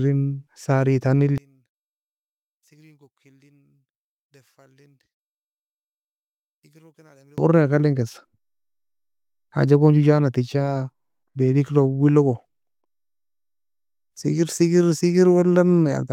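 From 1.38 s to 7.38 s, one channel inverted is the likely cause: one side's polarity appears reversed, so the centred speech cancels against itself when summed, and the level falls by about 36 dB, leaving only a faint residue until it recovers.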